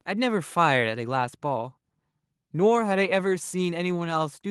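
Nothing in the recording stood out as a technical problem on listening.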